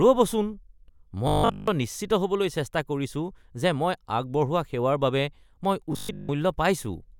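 A rigid, metallic buzz at 50 Hz replaces this speech twice: entirely from 1.28 to 1.68 s, just before "নিশ্চিত হ'বলৈ চেষ্টা কৰিছো", and for most of 5.93 to 6.29 s. This robotic sound from repeated short buffers likely comes from a 20 ms chunk looping while fresh audio is skipped.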